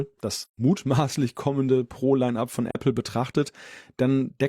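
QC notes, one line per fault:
0.43–0.58 s, AAC frame loss with muting: the speech drops into a soft-edged hole of about 128 ms, which fits three lost frames. The decoder zeroed their spectrum, so the overlapping windows fade the sound out and back in rather than cutting it.
2.71–2.75 s, AAC frame loss with muting: a shorter dip of about 43 ms, consistent with a single lost frame. The same zeroed spectrum gives the same gentle fade down and up.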